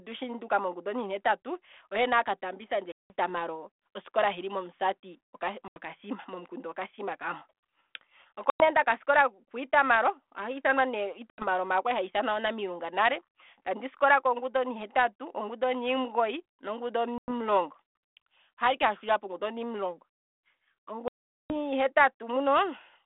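Six dropouts break up the speech, each one packet loss on an ADPCM call. They hit at 2.92 s (180 ms lost), 5.68 s (80 ms), 8.5 s (100 ms), 11.3 s (80 ms), 17.18 s (100 ms) and 21.08 s, the longest at 420 ms. Each is a hard-edged gap of silence. Afterwards the G.726 decoder's predictor and step size have drifted from the sender's, so the speech comes back with a little distortion before settling over a few tens of milliseconds. The 32 kbit/s coding between the gaps sounds like its usual narrow telephone band.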